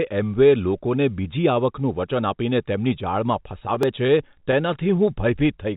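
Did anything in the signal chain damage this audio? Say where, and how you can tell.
Yes. Dropped buffer (overrun) at 3.00 and 3.83 s: the speech jumps ahead a tiny slice, likely a driver buffer overwritten before being read.

Repeated stalls (stutter) from 3.64 to 5.09 s: thirteen short network gaps, up to 16 ms, were filled by the jitter buffer, so speech drags without losing anything.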